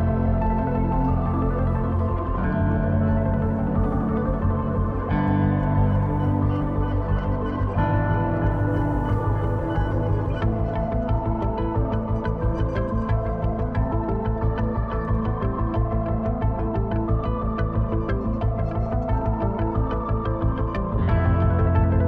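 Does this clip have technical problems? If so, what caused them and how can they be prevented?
No, no technical problems are audible here.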